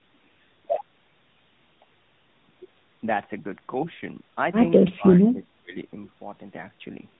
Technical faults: tandem speech coding

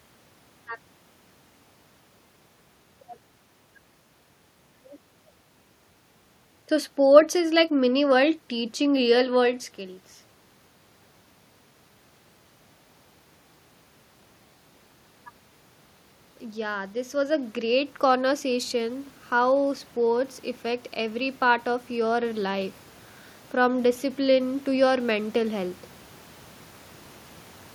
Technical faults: automatic gain rising

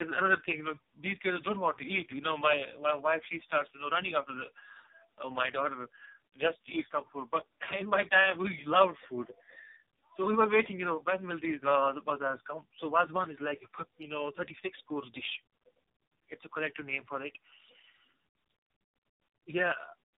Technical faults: tandem speech coding

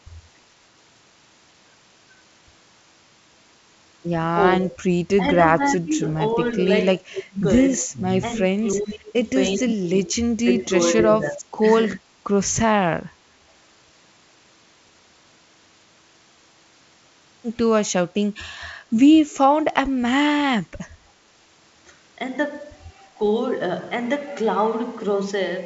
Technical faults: speech suppressed in double talk; echo leak

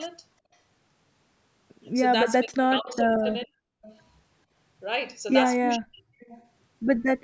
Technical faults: speech suppressed in double talk; echo leak

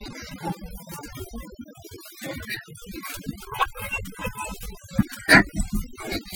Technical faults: overdone noise removal

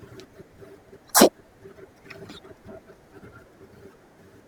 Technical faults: audio read two samples at a time (double speed)

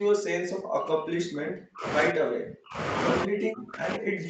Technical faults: speech suppressed in double talk

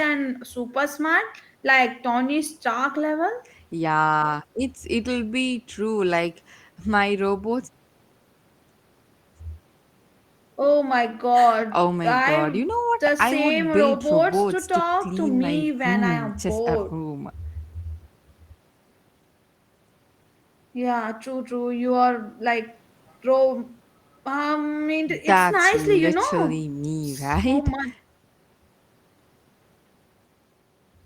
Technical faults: none

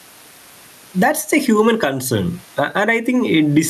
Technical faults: gain pumping

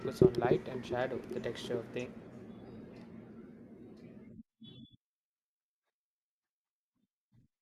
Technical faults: damaged data in a compressed stream

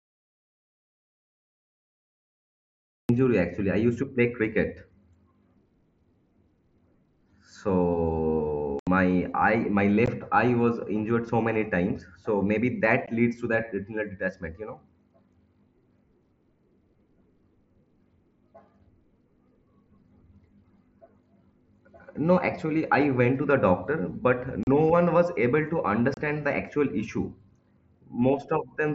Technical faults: audio dropout to silence; unconcealed Bluetooth headset packet loss

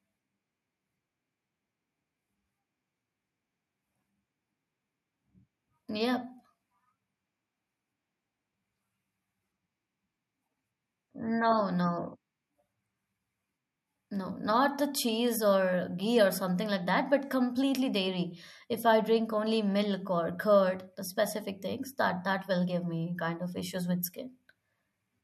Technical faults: none

